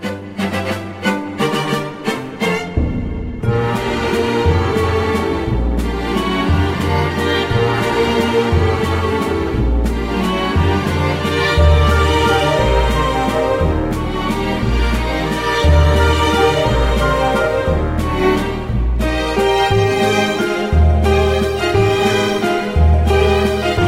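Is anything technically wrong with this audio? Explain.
No, nothing in the audio points to a technical fault that needs attention.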